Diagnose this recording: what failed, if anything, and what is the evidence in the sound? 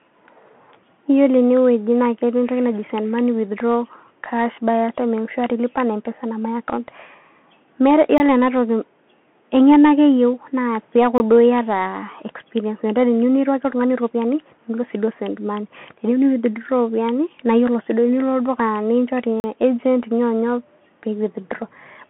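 Throughout, the speech sounds boxed-in and scratchy, with granular hiss and nothing above 3.8 kHz: the Bluetooth CVSD headset codec, whose one-bit delta steps fit a 64 kbps link, is at the codec stage.

Short holes, at 8.18–8.20, 11.18–11.20 and 19.40–19.44 s, are blocks of digital silence: zeros were played, likely because the output buffer went unfilled.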